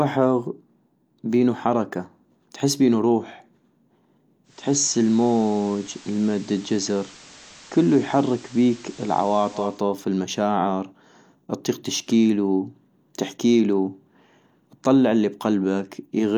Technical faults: digital radio blending to analogue

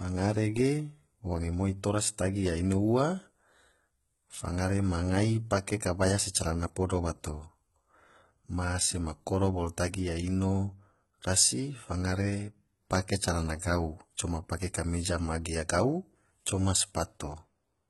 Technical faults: HE-AAC compression

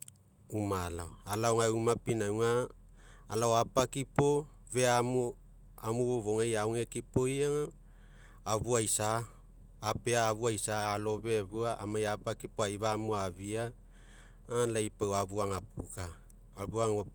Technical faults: none

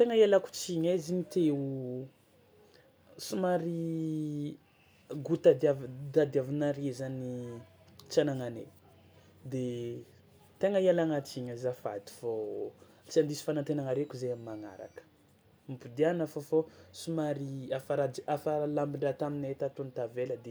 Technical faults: none

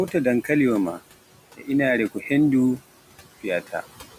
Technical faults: noise suppressor artifacts; speech cut by the noise suppressor

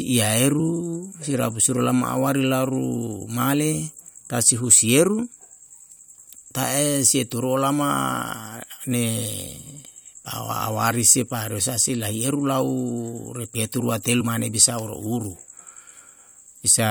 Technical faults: compressed frames skipped

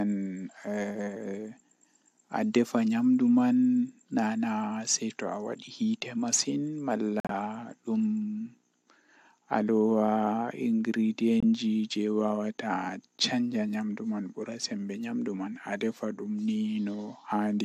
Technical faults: corrupt frame muted

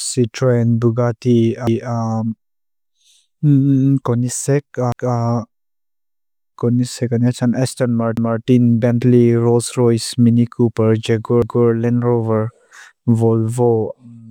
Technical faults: overlapping chunks

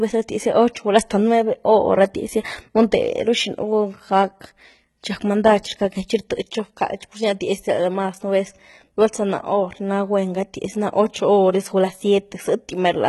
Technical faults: HE-AAC compression

